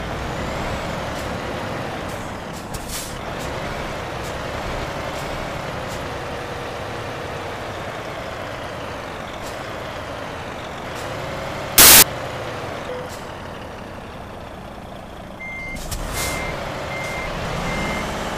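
At 11.78 s, for about a quarter second until 12.02 s, samples built from the wrong bytes turn the audio into loud, harsh broadband noise: misaligned byte assembly makes the fast-changing low bits dominate each value. A spectrogram shows a full-band block.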